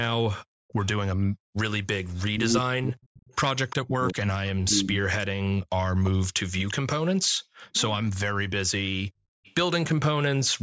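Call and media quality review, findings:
Echo leak at 0.68–0.87 s, 2.21–4.13 s, 6.05–6.73 s and 9.44–9.95 s: faint-to-moderate voice copy trailing 345 ms behind, likely far-end echo canceller residue; a repeat, not reverb tail.

Speech suppressed in double talk, 2.32–5.28 s: talker dips deeply in pieces, roughly 1.5 s total, likely canceller mistaking overlap for echo; the talker is lost, not just room.

Background gated by the echo canceller, 5.51–7.74 s: room sound drops up to about 40 dB, around 1 s total, while loudspeaker plays; ambience pumps.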